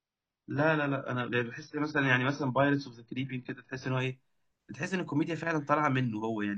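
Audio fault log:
0.0–4.0 s, adaptive stream starting at a low bitrate: the speech has nothing above 6 kHz and heavier codec artefacts, which points to a low-rate AAC version chosen for a fast start. At 4.0 s the player steps up to a better version, and the treble returns abruptly without any gap.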